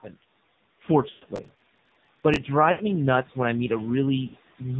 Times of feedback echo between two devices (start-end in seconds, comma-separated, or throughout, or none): none